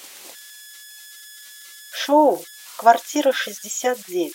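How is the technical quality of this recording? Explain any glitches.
The recording has one technical problem: converter idle tones running through the whole speech clip. An undithered delta-sigma converter, handling low-level input, slips into repeating bit patterns that produce tones near 1.5 kHz and grainy noise under quiet passages, sitting about 22 dB below the signal. On a spectrogram it appears as a thin horizontal line around 1.5 kHz persisting through pauses.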